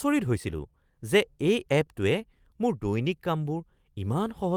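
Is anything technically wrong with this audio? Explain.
Yes, there are two related faults. Clock drift between sender and receiver runs through the whole clip: the sender's audio clock is about 4% slower than the receiver's, so the receiver's jitter buffer keeps draining and must be topped up, which makes the speech play slightly stretched and unsteady.

Repeated timing corrections occur from 0.57 to 4.30 s. To stay in step with the slow sender, the receiver keeps repeating short pieces of audio, adding roughly 150 ms overall at an effective speed of 96%. These edits are small and unevenly spaced, with a faintly dragging tempo.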